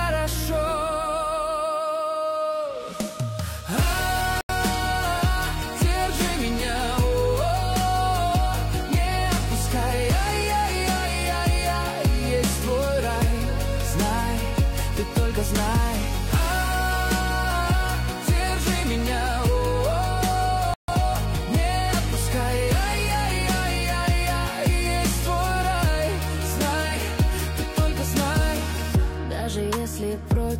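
Bluetooth stall at 4.41 s and 20.74 s: the sound drops to silence for 83 ms, then 145 ms, likely as interference delayed packets and drained the headphone buffer.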